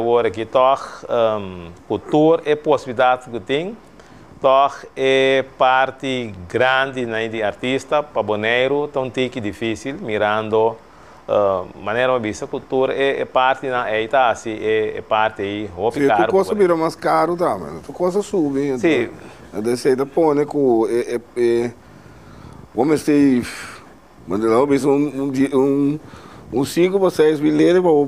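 Nothing in the audio stood out as a technical problem on listening.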